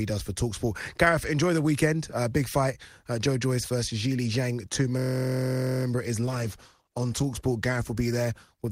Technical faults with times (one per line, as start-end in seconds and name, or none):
4.99-5.85 system hang loop
6.27-8.71 call bitrate drop